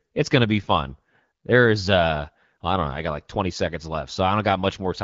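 No faults detected in this speech; the band-limited, lightly coded character fits an AMR wideband (HD Voice) codec path running at 12.65 kbit/s, a rate at which AMR-WB keeps speech clear.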